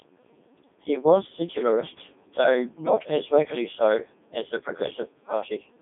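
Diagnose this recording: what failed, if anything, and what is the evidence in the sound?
The speech has gone through a Codec 2 vocoder for its whole length, a failure at the codec stage. Throughout, it sounds robotic and buzzy, band-limited to roughly 200 Hz to 3.6 kHz with nothing above 3.8 kHz. The encoder sends only pitch, voicing, energy and a spectral envelope, and the decoder rebuilds the sound from sine waves, so the original waveform is gone. The heavy damage fits Codec 2's 3.2 kbit/s mode.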